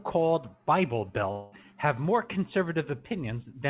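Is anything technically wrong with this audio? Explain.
Yes. From 1.32 to 1.54 s the sound smears into a fading buzz-hiss, then resumes with 0.2 s gone, likely a long network dropout the receiver papered over.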